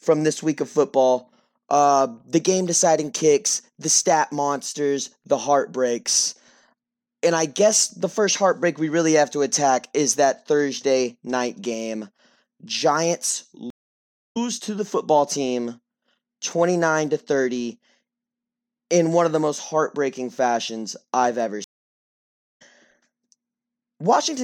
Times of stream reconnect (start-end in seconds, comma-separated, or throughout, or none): 13.70-14.37, 21.64-22.62